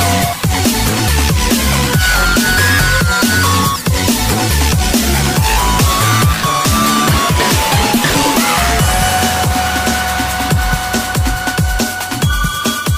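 No technical faults are audible.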